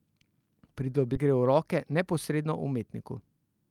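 At 1.15 s the speech lurches forward: between 1.15 and 1.26 s it jumps with almost no gap, so a chunk of speech is simply missing and the two sides are butted together. This is a skip ahead. Roughly 0.7 s of audio was thrown away while later audio was already queued, whether it was lost in transit or dropped by the jitter buffer when it overflowed. The delay fell by about the same amount, and playback resumed from the newer material.

From 1.77 to 2.52 s the speech sounds slightly rushed but keeps its pitch, running at about 107 percent of normal speed. This is a jitter buffer speed-up. The buffer was holding more audio than it aims for, so the receiver repeatedly cut out short slices a pitch period or so long, removing around 50 ms in total to pull the latency back down.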